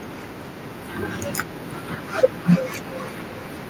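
From 1.73 s to the end at 3.69 s, the speech comes back at an interval of roughly 300 ms, peaking at about 7 dB below the speech. This is feedback echo between two devices: one device replays audio its neighbour captured, and the neighbour's echo canceller never removes it.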